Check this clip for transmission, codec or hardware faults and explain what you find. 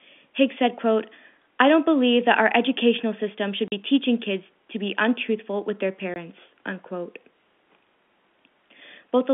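The speech drops out twice, with hard-edged silent gaps from 3.68 to 3.72 s and from 6.14 to 6.16 s. This is packet loss filled with silence. The 40 ms and 20 ms holes fit lost 20 ms packets that the receiver replaced with silence, cutting the narrowband G.711 telephone audio abruptly.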